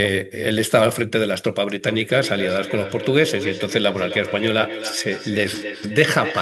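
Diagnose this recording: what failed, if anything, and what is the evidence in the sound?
This is call processing: feedback echo between two devices. From 1.87 s to the end, the speech comes back at a steady gap of roughly a third of a second, peaking at about 10 dB below the direct sound. A second device nearby replays the call, and this microphone picks it up again.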